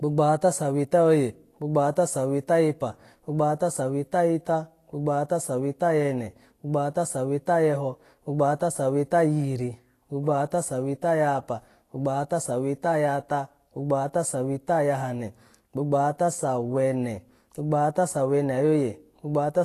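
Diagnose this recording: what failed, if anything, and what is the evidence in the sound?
The codec stage is at fault: the speech carries plainly audible Vorbis compression damage throughout, with hissy, grainy treble and smeared consonant attacks. A spectrogram would show nothing above 14.2 kHz and speckled, noise-like upper bands, which fits a low bitrate near 35 kbps, likely from an over-aggressive Vorbis encode.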